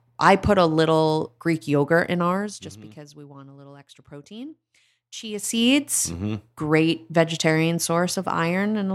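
Just after "yogurt in", from 2.28 to 2.79 s, the level falls by roughly 20 dB in 2 dB steps, about twenty a second, causing zipper noise. Each unsmoothed jump clicks, giving a rapid ticking over the speech. From 5.20 to 5.62 s the level climbs back the same way. A waveform shows a staircase envelope rather than a ramp, and a spectrogram shows faint, evenly spaced vertical lines through both passages.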